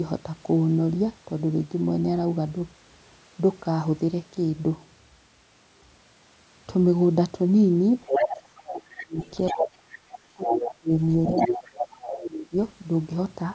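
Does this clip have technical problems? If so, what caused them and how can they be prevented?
Yes. A second voice leaking through appears at 8.02–8.6 s, 8.98–9.96 s, 10.48–10.74 s and 11.37–12.07 s, ranging from roughly as loud as the talker to somewhat quieter. The likely cause is a loudspeaker feeding the far end into the microphone while the echo canceller leaves a residue. A headset or better acoustic isolation prevents this.

The talker's own speech is suppressed during double talk, dropping by roughly 20 to 30 dB at 8.16–9.2 s, 9.52–9.73 s, 10.33–10.9 s and 11.29–12.56 s, overlapping the leaked voice. The echo suppressor, unable to separate the two, likely attenuated everything. Using a headset, or a canceller with stronger double-talk detection, avoids this.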